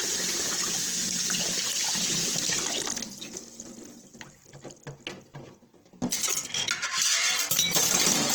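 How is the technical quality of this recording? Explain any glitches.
The technical quality is held back by one fault, Opus compression, which runs through the whole recording. The sound is rough and grainy, with tonal parts turning noisy and hazy rather than clean. The damage is plainly audible, yet the top end stays open up to about 20.2 kHz, with few gaps or swirls. This likely comes from Opus in its music (CELT) mode at a rate that fits around 16 kbps. At that rate, band energies are kept but their fine detail is refilled with folded or noise-like content.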